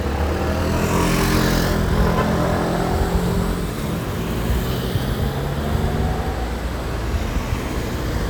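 Listening to this recording of sounds, nothing stood out as a technical problem.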